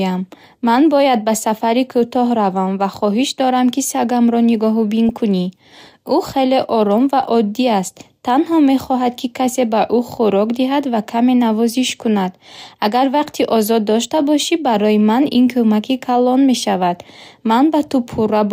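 DAB burbling at 5.09 to 5.19 s: weak reception let bit errors slip past error correction into the MP2 audio, so corrupted samples put short blips of noise in single sub-bands and corrupted scale factors make sub-bands jump in level, giving a short burst of burbling over the speech, consistent with about eight damaged frames.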